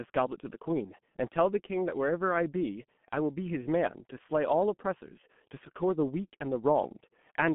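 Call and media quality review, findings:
G.723.1 codec, whole clip. Speech muffled and hoarse, nothing above about 3.4 kHz, little below 150 Hz. Consonants smeared, heavy damage. Slow 30 ms frame updates blur fast changes. Sound fits a roughly 6 kbit/s low-rate telephony leg.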